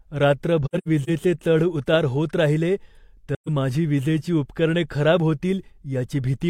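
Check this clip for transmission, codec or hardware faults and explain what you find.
The clip has two episodes of AAC frame loss with muting.

From 0.65 to 1.10 s, just before "चढ उतार होत राहिले", lost AAC frames were zeroed by the decoder. About 0.21 s of audio vanishes in several soft-edged gaps, the longest around a tenth of a second.

From 3.34 to 3.49 s, just after "चढ उतार होत राहिले", more frames were lost and muted. The overlapping windows fade the sound out and back in around a single hole of about 0.13 s.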